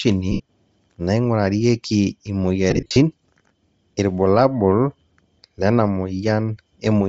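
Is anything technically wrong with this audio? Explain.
Yes. Throughout the speech there is a breathy, grainy upper band, likely from Bluetooth LC3 compression at a rate that fits about 32 kbps. The codec zeroes the high spectrum and fills it with noise, which shows on a spectrogram as speckled hiss above the voiced harmonics.

Lost LE Audio frames occur at 0.32 to 0.40 s (75 ms) and at 2.70 to 2.96 s, where about 170 ms goes missing in gaps scattered over 255 ms, the longest run roughly 40 ms. The decoder repeats the last spectrum with random signs, so the speech smears into noise. On a spectrogram, the harmonic lines turn into blurred noisy patches.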